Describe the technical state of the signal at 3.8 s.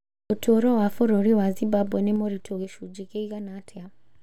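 At 3.8 s the signal is intact: the speech carries through without any audible fault.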